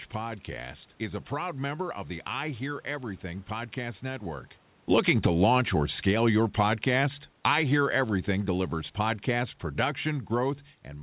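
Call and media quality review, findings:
Automatic gain falling, 4.83 to 10.65 s, starting just after "podcast network". Level sinks gradually by about 9 dB, and the room noise sinks with it, so the AGC stage is at fault, not a talker moving off-mic, which would change only the voice. Band-limited to 4 kHz throughout, consistent with G.711 A-law at 64 kbps.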